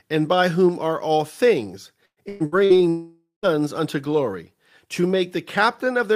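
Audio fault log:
2.05–2.78 s, repeated packet loss (robotic sound), after "whom are all things": four gaps up to 113 ms, patched by repeating prior sound, so half the stretch turns choppy and robotic.
2.89–3.46 s, long network dropout, likely: sound smears into a fading buzz, then about 140 ms of silence, resuming at "unto glory to" with roughly half a second gone.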